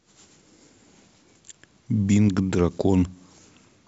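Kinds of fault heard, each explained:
No faults are audible anywhere in this speech clip.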